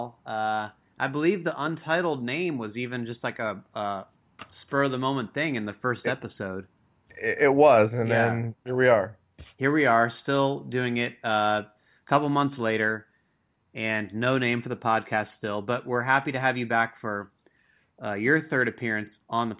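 No technical faults can be heard in this speech recording.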